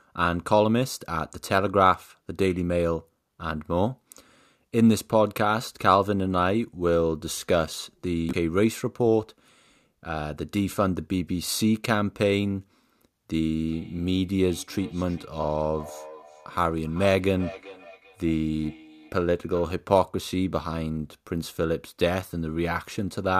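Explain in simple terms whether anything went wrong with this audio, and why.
From 13.68 to 19.72 s there is feedback echo between two devices: one device replays what the other's microphone sent, and that microphone picks it up again. The faint copy returns at a steady gap of roughly 0.4 s, not as the smooth blur of room reverberation.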